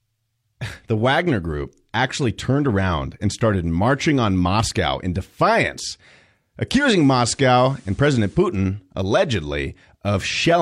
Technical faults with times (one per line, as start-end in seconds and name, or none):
6.77-8.46 digital radio blending to analogue